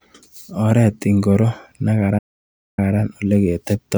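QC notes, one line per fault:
2.18–2.79 s, playback stall: the speech halts mid-flow and the output falls to dead silence for about 0.59 s before the sound picks up again. This is likely the player running dry of buffered data or having its output thread blocked, so nothing reaches the output until it recovers. On the waveform it appears as a flat, near-silent gap with abrupt edges; the spectrogram shows a clean vertical band of empty time across all frequencies.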